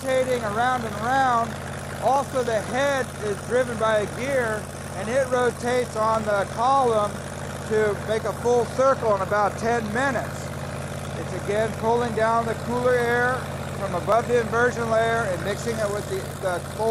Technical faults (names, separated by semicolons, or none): audio missing between chunks